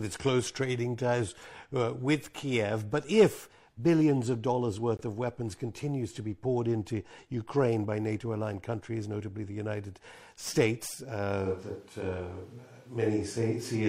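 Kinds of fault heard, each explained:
gap between stream segments: a hard-edged silent hole of about 21 ms at 4.97 s, between "if billions of dollars" and "of weapons continues to", where mistimed segment boundaries left empty time.
switch to a distant microphone: from 11.47 s to the end the speech turns roomy and hollow with thinner bass, likely because a farther microphone replaced the close one; level stays about the same.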